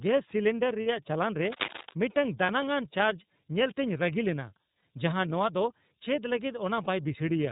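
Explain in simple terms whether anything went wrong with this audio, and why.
The speech sounds thin and muffled, slightly rough and synthetic, for the whole clip. That is the iLBC codec, a phone-call compression method that discards everything above 4 kHz and rebuilds the voice in 30 ms chunks, losing some natural texture.

At 0.81 to 0.87 s, and briefly at 2.46 to 2.50 s, 4.80 to 4.83 s and 6.84 to 6.87 s, the voice turns into a short held, faintly buzzy hum. These are lost iLBC frames. Pieces of the signal went missing, and the decoder filled each gap by repeating the last bit of voice mixed with noise. The voice is clear again almost immediately.

From 1.42 to 1.94 s, a fairly loud scratchy, rustling noise sits over the speech for about half a second. This is cable scratch noise, likely from a worn cable or connector being moved and briefly making a poor, crackling contact.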